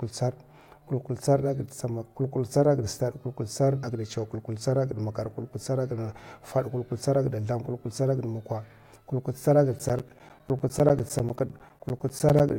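From 9.79 to 12.5 s, periodic USB or driver dropouts silence about 10 ms every 0.1 s, producing strictly regular ticks, unlike the random timing of crackle.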